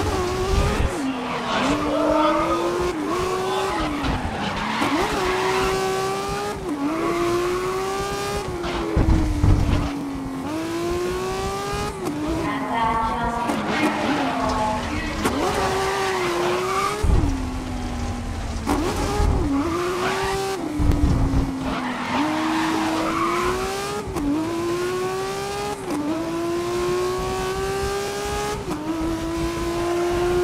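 At 3.99, 10.01, 16.03, 22.06 and 28.08 s, overlapping chunks replay about 23 ms at each 6-second join, causing a regular click-stutter, visible as a duplicated waveform segment and a thin vertical spectrogram line.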